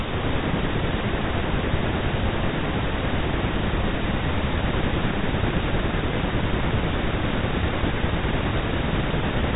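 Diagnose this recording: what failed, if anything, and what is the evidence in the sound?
Nothing failed; no stage shows any fault here.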